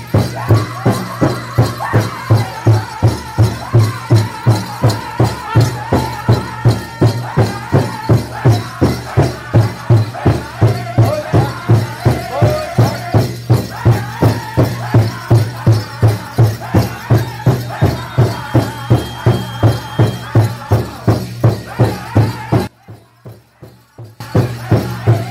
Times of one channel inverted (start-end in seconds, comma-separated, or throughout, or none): 22.67-24.20